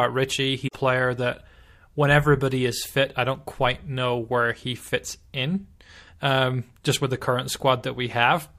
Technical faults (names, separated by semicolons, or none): damaged data in a compressed stream